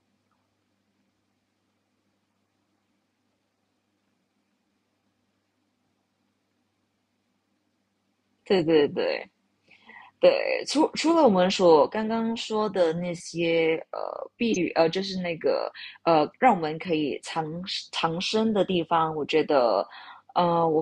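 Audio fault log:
14.52–14.57 s, corrupt frame decoded: a loud, sharp blip as a couple of damaged compressed frames decode with wrong gains, putting energy at the wrong frequencies.
17.17 s, corrupt frame decoded: a faint, brief chirp from two more bit-damaged frames played anyway, their misread codes scattering stray energy.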